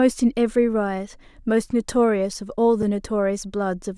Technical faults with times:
2.82 block of digital silence

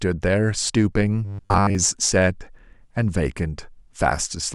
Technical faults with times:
1.25-1.75 robotic sound from repeated short buffers

